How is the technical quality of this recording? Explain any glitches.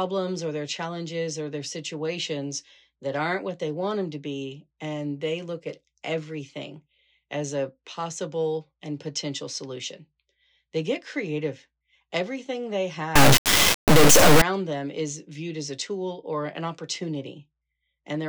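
The recording has one serious glitch, a short burst of integer read as float running from about 13.16 to 14.42 s, just before "them is viewed as". For that stretch the 32-bit integer samples are being taken as 32-bit float values, so the bit patterns turn into numbers that are either tiny or absurdly huge. The output gets slammed between near-silence and the clipping ceiling, which you hear as a harsh, very loud square-wave buzz that drops out to nothing wherever the sound gets quiet.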